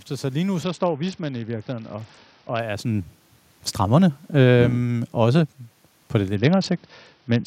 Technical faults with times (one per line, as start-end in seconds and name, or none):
0.63-2.60 Bluetooth SBC bit pool drop
3.80-5.53 automatic gain falling
6.35-7.46 Bluetooth SBC bit pool drop